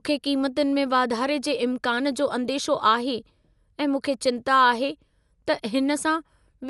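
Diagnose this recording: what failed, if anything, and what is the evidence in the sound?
Codec stage: throughout, the speech sounds dull and rough, with a flat spectrogram ceiling at 11.4 kHz. Likely Dolby Digital compression, fitting 64 kbps.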